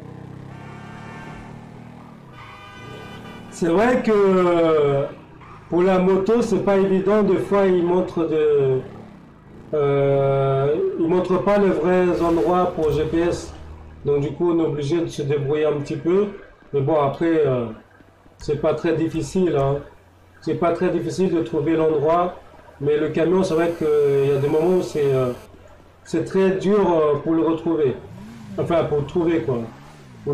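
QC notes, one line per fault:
23.50–25.46 s: GSM phone buzz, a steady, raspy 217 Hz buzz rich in harmonics at about -25 dB, from a nearby 2G phone's call bursts being rectified by the audio circuitry.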